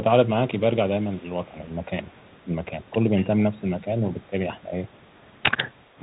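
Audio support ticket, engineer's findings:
Bluetooth CVSD headset codec, whole clip. Speech band-limited to about 4 kHz, nothing above. Granular hiss under the speech, scratchy sibilants, slope-overload grit on loud high-frequency peaks where the adaptive one-bit step can't keep up. Character fits a 64 kbps CVSD headset link. Component: Bluetooth headset audio path, narrowband mode. Damage plainly audible throughout.

Speech suppressed in double talk, 1.46–1.93 s, 2.44–4.74 s, and from 5.98 s to the end. Talker level dips in pieces: about 5 dB over roughly 150 ms in the first span, about 10 dB over roughly a second in the second, a short drop of about 15 dB at the end. Likely the echo canceller attenuating near-end speech while the far end talks, unable to separate talker from loudspeaker echo.

Echo leak, 2.12–2.45 s, 2.89–3.24 s, 4.89–5.97 s. Faint delayed copy of the speech 226 ms behind the original: about 35 dB down in the first span, about 25 dB down in the second (most audible), about 40 dB down in the last. 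Likely residual loudspeaker echo not fully removed by the far-end echo canceller and returned into the call.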